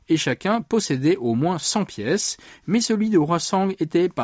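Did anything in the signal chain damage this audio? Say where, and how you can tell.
No, none of the stages between capture and playback left any audible damage on this speech recording, and the signal arrives intact.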